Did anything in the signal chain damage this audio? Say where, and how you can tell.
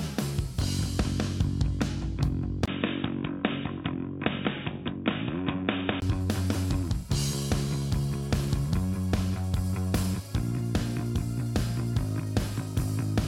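Yes. From 2.66 to 6.02 s the sound goes boxy, nothing above 3.8 kHz, a few dB quieter with a new noise floor, after a 20 ms gap. That's likely an input switched to a poorer device.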